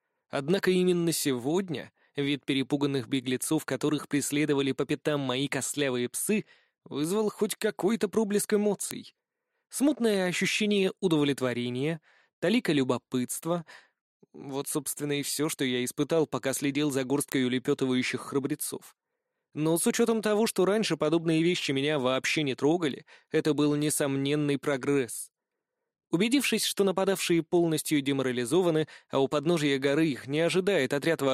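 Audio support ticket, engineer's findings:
Word clock ticks: receiver running free on its own clock, not locked to the digital source; drift of around 20 ppm. One sample dropped or repeated per slip, giving a short tick roughly once a second, about 30 in all, from 0.50 s to 31.30 s.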